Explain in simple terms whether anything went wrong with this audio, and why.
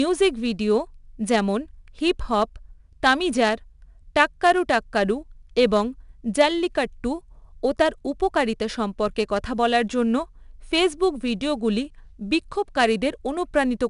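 Something did go wrong. The whole speech clip went through 4-bit ADPCM compression. Each sample gets stored as a rough little step from a guess, so a gritty hiss clearly rides along with the speech from start to finish. Nothing above 10.6 kHz survives, which takes some sparkle off too.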